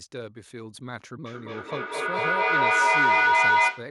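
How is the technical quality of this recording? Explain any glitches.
Feedback echo between two devices takes over from 1.25 s to the end. A second device on the same call replays this microphone's sound, which is picked up again, so each word returns roughly every fifth of a second, growing thinner and ringing, and builds up to about 14 dB above the speech.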